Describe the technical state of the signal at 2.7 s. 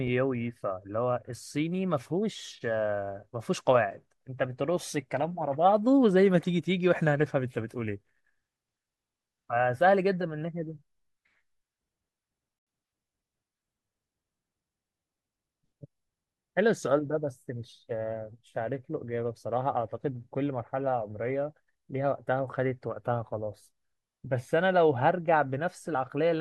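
At 2.7 s the speech signal is intact, with no audible technical fault at that moment.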